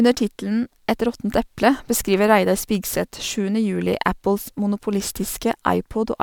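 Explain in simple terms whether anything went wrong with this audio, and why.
Nothing went wrong with this speech recording, so there's nothing here to fix or explain.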